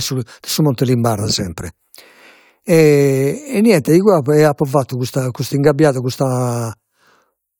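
No technical faults can be heard anywhere in this speech recording; the signal stays continuous and stable throughout.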